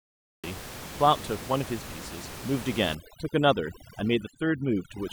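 A short speech recording with two faults. The first is a cut-off start: the file holds digital silence from 0 to 0.44 s, and the speech then appears mid-sound, with no natural onset or fade-in. The capture or stream evidently began late, so the opening of that sound was never recorded, and the step from digital silence to running signal at 0.44 s is abrupt. The second fault is overdone noise removal from 2.95 s to the end. The room noise, audible about 13 dB below the speech before that point, drops and breaks up into twinkling, warbling specks. A noise reduction stage set far too aggressively is gating individual frequency bands down whenever they approach its noise estimate, and the quieter components of the speech fall below that threshold and are stripped out along with the background.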